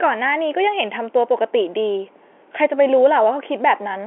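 No faults turn up anywhere in the speech, which comes over a normally working G.711 telephone line confined to roughly 300 Hz to 3.4 kHz.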